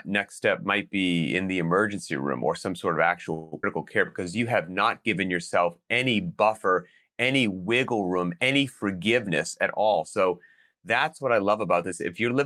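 Right after "or some sort of", at 3.33 s, the speech stalls for about 0.19 s until 3.54 s in a call audio freeze. The last sound is stretched into a fading buzzy tail, and then the sentence resumes where it left off with nothing lost. This is likely packets delayed long enough to drain the jitter buffer. On a spectrogram the final partials continue as smeared horizontal bands that thin out. The waveform shows a decaying tail instead of silence.

Only moments later, from 3.62 to 3.65 s, comes a skip ahead. Roughly a tenth of a second of speech is gone, bridged by a filler only about 11 ms long, so the audio lurches forward with an abrupt join. The spectrogram shows a vertical seam where formant tracks jump discontinuously, and the waveform shows a sudden change in envelope with no gap.

From 3.84 to 4.74 s, leading into "not given yourself any", a jitter buffer slow-down plays the speech at 87% of its normal rate while keeping the pitch unchanged. 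Repeated pitch periods add about 121 ms, so sounds drag. The spectrogram shows harmonics stretched horizontally without shifting in frequency. The waveform shows runs of near-identical cycles.

After "any wiggle room any", jitter buffer speed-ups run from 9.27 to 10.26 s and again from 10.68 to 11.84 s. Each runs at 108% speed and trims roughly 100 ms by cutting out pitch periods, so delivery sounds hurried at unchanged pitch. Syllables look compressed on the spectrogram, and small splice points break up the periodic waveform.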